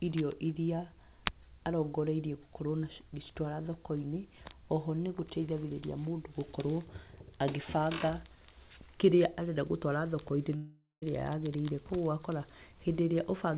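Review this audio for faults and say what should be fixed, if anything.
From 10.56 to 11.04 s the speech breaks into a fading buzz, then near-silence, before resuming with the lost portion gone. This is likely a long network dropout. A larger jitter buffer and redundant packets over the G.711 path, which already stops at 4 kHz, would prevent it.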